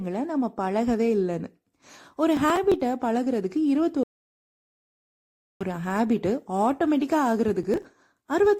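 Processor overload crackle at 2.37 to 2.74 s: the processor keeps missing its deadlines for short buffers, which fits buffers of about 5 ms, and each late buffer is simply skipped. Several hard-edged gaps in a row produce a gritty crackle over the speech.

Stream reconnect at 4.03 to 5.62 s: the connection drops and the audio goes silent for about 1.57 s. A fresh decoder then picks up the live stream roughly a second and a half further on, so that stretch of speech is lost.

Processor overload crackle returns at 7.63 to 7.85 s. This time around ten consecutive buffers are skipped, giving a denser burst of tearing that stops once the load eases.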